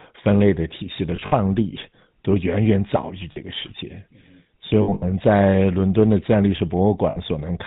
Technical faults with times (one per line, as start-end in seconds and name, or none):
0.00-7.67 GSM full-rate codec
1.16-1.33 lost GSM frames
3.32-3.37 lost GSM frames
4.82-5.04 lost GSM frames
7.10-7.18 lost GSM frames